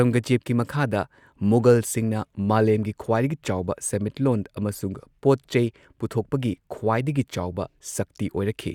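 No technical faults can be heard anywhere in the recording.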